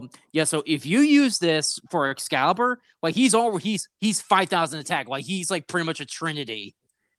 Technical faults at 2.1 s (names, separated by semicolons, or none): short stall from a late packet